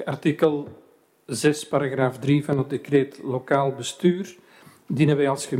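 At 2.53 to 2.59 s the sound abruptly dips by about 6 dB and returns, likely one channel dropping out before the stereo pair was summed to mono.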